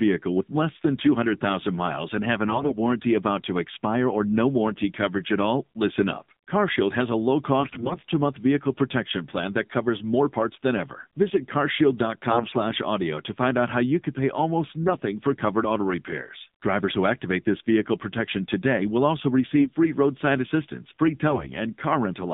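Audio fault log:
Throughout: AMR narrowband mobile codec. The band runs roughly 150 Hz to 3.7 kHz, and the buzzy, synthetic edge on the voice fits a low rate around 7.4 kbps.
2.48–2.78 s, 7.60–7.97 s, 12.30–12.57 s, 19.58–19.70 s, 21.30–21.50 s: AMR bit errors. Each burst sounds hoarse, scratchy and gargly, while pitch and level roughly hold. Flipped low-priority bits misplace the excitation pulses and skew the finer pitch, gain and spectral values. The first burst lands after "miles and have an", the fourth after "protection today will also", and the fifth after "free roadside assistance free".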